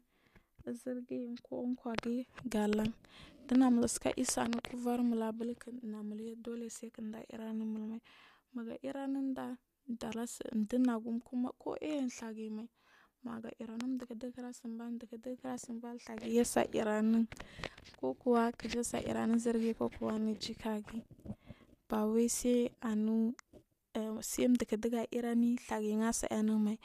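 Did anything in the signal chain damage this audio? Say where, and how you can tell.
Yes. There are three loud pops on the speech: at 3.55 to 3.57 s, a double one from 4.53 to 4.67 s, and another at 13.81 to 13.83 s, peaking roughly 15 to 20 dB over the signal while speech continues underneath. Likely an analogue-side voltage jump from a plug, switch or static.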